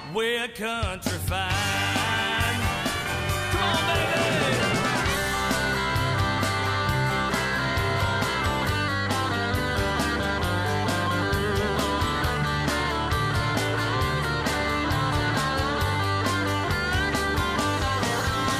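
Listening closely, nothing in the audio stood out as a technical fault at any point.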